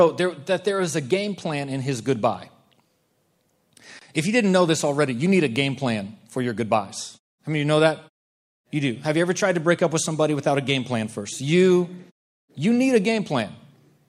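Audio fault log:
No faults are present in this speech clip. In the pauses the background fades to silence and comes back in time for the next sound, with no speech lost.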